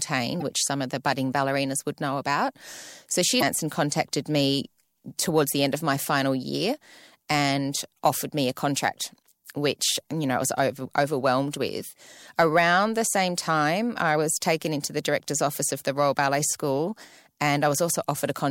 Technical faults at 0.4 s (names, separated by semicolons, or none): damaged data in a compressed stream